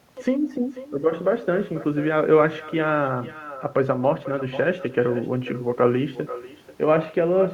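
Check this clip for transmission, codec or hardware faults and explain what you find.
One fault is present throughout: echo with no canceller. The far end's loudspeaker output reaches its microphone uncancelled, returning the speech roughly half a second later, about 16 dB down and thin.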